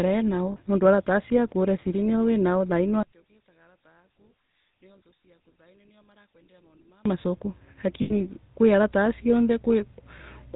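Throughout, the speech carries the buzzy, gravelly roughness and 4 kHz ceiling of the GSM full-rate codec, consistent with 13 kbps pulse-excited vocal-tract coding.

Lost GSM frames occur at 0.52 to 0.57 s, 8.02 to 8.12 s and 10.18 to 10.21 s. Each gap is filled by repeating the last good frame, heard as a brief rough, metallic ring, the longest lasting about 80 ms.

From 3.03 to 7.06 s the centred voice drops by about 23 dB, leaving a faint residue. This is likely one channel inverted, cancelling the common content when summed to mono.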